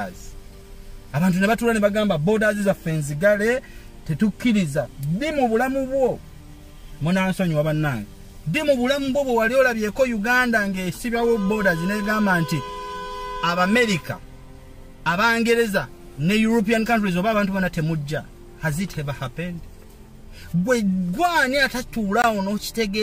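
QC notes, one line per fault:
22.22 s, block of digital silence: roughly 20 ms of samples drop to silence and return with no fade, so the waveform steps abruptly at both edges. The gap is heard as a brief hole.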